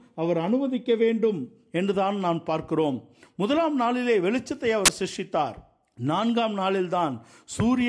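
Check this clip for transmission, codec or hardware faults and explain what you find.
One fault is present in this speech clip: a short burst of file tags played as audio, from 4.86 to 4.88 s. For roughly 28 ms the player has read part of the file's metadata, here an embedded cover picture, as if it were sample data. Because image data is already compressed, its bytes look statistically random, so the decoder turns them into very loud white noise. The result is a sudden, very loud hiss of static with abrupt start and end edges.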